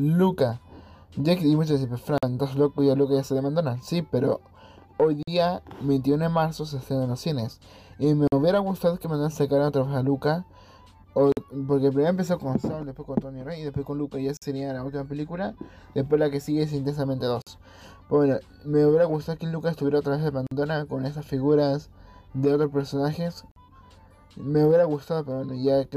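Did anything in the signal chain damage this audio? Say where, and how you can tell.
Yes, there's a gap between chunks at the playback or storage stage: holes of about 48 ms at 2.18, 5.23, 8.28, 11.32, 14.37, 17.42, 20.47 and 23.51 s. The steady spacing fits 3-second chunks, each followed by silence at the join, so the sound is interrupted rather than lost.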